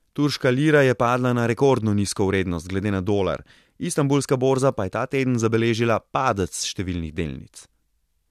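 Speech, with nothing technically wrong to report.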